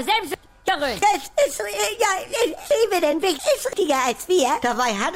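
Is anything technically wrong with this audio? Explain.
Yes. From 0.34 to 1.02 s and from 2.71 to 3.73 s, chunks play out of order: 341 ms blocks were written late, by one and then two chunks, so the sound jumbles at three hard joins each time. At 1.26 s, compressed frames are skipped: what sounds like a single 24 ms frame is left out, so the audio leaps ahead by about 20 ms.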